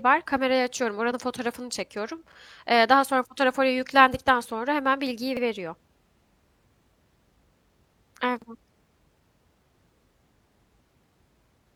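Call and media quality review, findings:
Overlapping chunks at 5.37 s and 8.42 s: short stutter/click at each join, 50 ms of speech replayed. Probable component: chunked processing or transport path, 3 s chunks, each starting 50 ms before the previous ends, so join audio plays twice.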